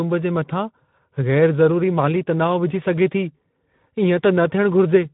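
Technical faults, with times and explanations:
Throughout, Speex codec: a hoarse, noisy CELP texture that fits roughly an 11 kbps setting. Nothing reaches above 3.9 kHz, but unlike a simple low-pass, the excitation itself sounds starved and grainy.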